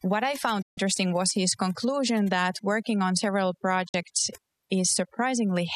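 It's a speech clip with heavy-handed overdone noise removal throughout: the background drops and breaks up into twinkly specks. There's also a digital broadcast dropout, a quick 8 ms fade to silence, right after "I found" from 0.62 to 0.78 s, about six lost frames' worth, resuming at "was his conclusion that". A shorter one follows "that working on several" at 3.88 to 3.95 s, fitting roughly two frames.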